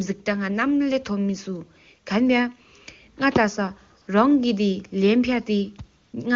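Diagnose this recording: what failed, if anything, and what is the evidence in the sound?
Brief smooth, steady noise replaces the real background at 4.01–4.07 s and 6.01–6.13 s: AMR comfort noise, where the codec's silence detection paused speech frames and the receiver synthesized noise.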